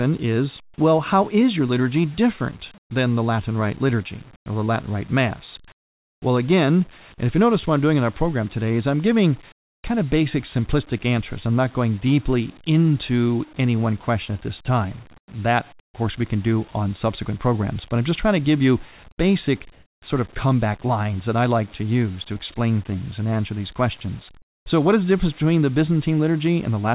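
Speech, band-limited to nothing above 4 kHz, which fits a narrowband call codec, has comfort noise in place of the background at 2.78–2.9, 4.36–4.46, 5.72–6.22, 9.52–9.84, 15.18–15.28, 15.8–15.94, 19.72–20.02 and 24.42–24.66 s. These are likely from discontinuous transmission, and each shows as flat, featureless noise about 7 to 27 dB quieter than the real background.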